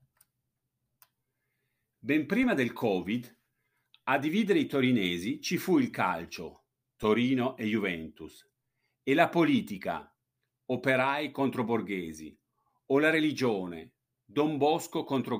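A DC step shifts the waveform's zero line twice in this speech recording, at 2.43 s and again at 7.03 s just after "ci fu il calcio". Each offset is about -35 dBFS and dies away as a 20 Hz high-pass pulls the baseline back, so each jump lands as a low thump while the speech continues unchanged.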